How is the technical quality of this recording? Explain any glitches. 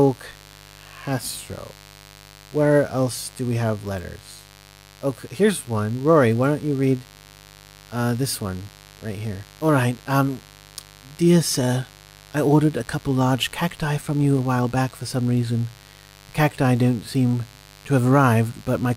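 The recording is compromised by a constant electrical interference fault that sits under the speech from start to finish.

Mains buzz runs throughout the clip. Sharp switching spikes from the 50 Hz supply, arriving twice per cycle from something like a dimmer, rectifier or poorly shielded cable, have leaked into the signal path. Because the spikes are so abrupt, they carry a dense stack of 50 Hz harmonics reaching up into the kilohertz range. The result is a steady, raspy buzz, roughly 25 dB below the speech, present beneath every phrase and in every pause.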